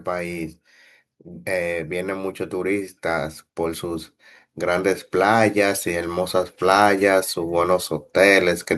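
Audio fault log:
6.59–8.65 s, automatic gain rising: the level control judged the input too quiet and lifted it by about 3 dB over roughly two seconds. The room noise and the speech swell together, which separates it from a speaker getting louder.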